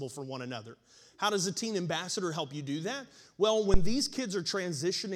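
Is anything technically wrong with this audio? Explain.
Yes. A phantom power thump hits this speech from 3.74 to 4.04 s. A supply being switched on a live input sends a sudden DC step through the coupling capacitors, which pass it as a low-frequency pulse. It sounds like a deep thud peaking at about -11 dBFS and fading with a decay of roughly 66 ms. On a waveform it appears as a large one-sided excursion easing back to zero. A spectrogram shows a brief burst of energy concentrated at the lowest frequencies.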